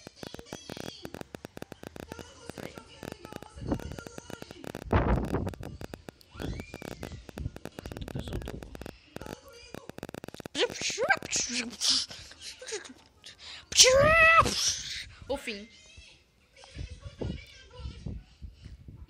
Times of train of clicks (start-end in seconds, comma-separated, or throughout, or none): 0.07-11.41